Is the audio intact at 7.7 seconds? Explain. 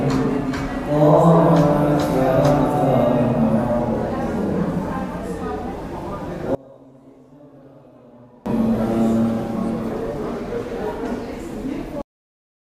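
No. At 7.7 seconds the clip is inside a collapse that runs from 6.55 to 8.46 s, where the level falls by about 27 dB and the sound turns faint. This is most likely one channel inverted: with one side's polarity reversed, everything the two channels share cancels when they are summed to mono, so centred content largely disappears. Only a weak residue of the material that differs between the channels remains until normal level returns at 8.46 s.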